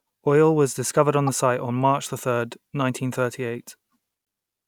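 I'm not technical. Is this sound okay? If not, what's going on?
No. There are two brief glitches in the speech, at 1.27 to 1.29 s, between "was discovered on" and "site on", and at 4.24 to 4.26 s. This is damaged data in a compressed stream. Part of the file got corrupted, so the player briefly misreads it before recovering.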